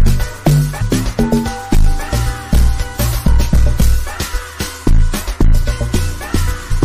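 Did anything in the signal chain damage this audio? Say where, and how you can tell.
Yes. The codec stage, or the stored or streamed file feeding it, has damaged data in the compressed stream. Short bursts of corrupted bytes made the decoder misread frames and lose sync while it hunted for the next valid frame header. Each one is a brief chirp, squawk, click or short hole that breaks into the sound: at 0.80 s, at 2.96 s, and from 6.70 to 6.72 s. All three are under about 25 ms, which fits single damaged frames rather than a sustained dropout.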